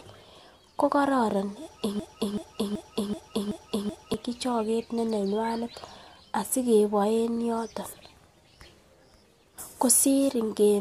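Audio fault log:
1.99–4.14 s, broken-record loop: the speech locks onto a fragment of about 380 ms and replays it exactly, six times back to back, before picking up again at "choget ne nenywanet". Likely a stalled player or stream resending its last buffer, so whatever should have played there is gone.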